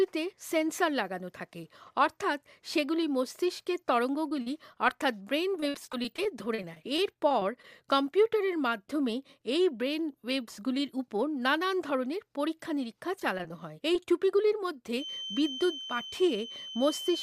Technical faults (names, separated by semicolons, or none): repeated packet loss (robotic sound); short concealed packet loss; feedback whistle